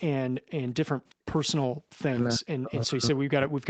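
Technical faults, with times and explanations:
0.18–0.66 s, 0.92–1.28 s and 1.67 s–1.73 s: background gated by the echo canceller. The room sound drops sharply, by about 40 dB in the first two stretches and about 24 dB in the last, then returns. The canceller clamps the microphone while the loudspeaker plays and releases it afterwards.
1.10–1.14 s: echo leak. A very faint delayed copy of the sound, roughly 35 dB below the speech and trailing it by 351 ms, slips through for a brief scrap. This is likely residual loudspeaker pickup that the echo canceller failed to remove and sent back.
2.01 s to the end: speech suppressed in double talk. The voice dips repeatedly, at worst by around 40 dB, and loses level in pieces through to the close. The likely cause is the echo canceller treating overlapping talk as echo and attenuating the near talker along with it.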